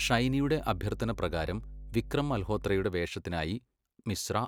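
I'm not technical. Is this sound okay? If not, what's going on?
No. Mains hum runs from the start to 2.85 s: a steady, low 50 Hz buzz underneath the speech, caused by electrical power leaking into the recording through wiring or nearby equipment.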